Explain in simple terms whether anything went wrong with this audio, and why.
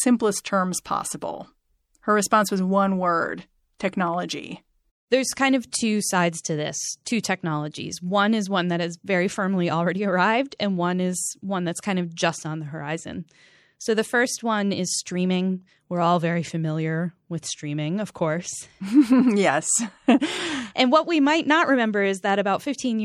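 The speech was likely squeezed too hard by MP3 compression, which discards detail. Throughout, it sounds watery and swirly, with metallic s sounds.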